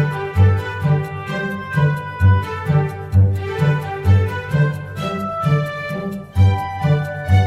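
No technical faults are audible.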